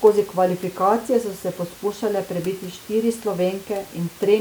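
No technical faults can be heard in this speech recording, and the steady room noise beneath it, sitting about 22 dB below the speech, belongs to the original capture rather than to any problem in the signal path.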